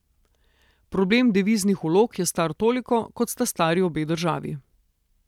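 Listening to the speech recording, nothing stood out as a technical problem at any point.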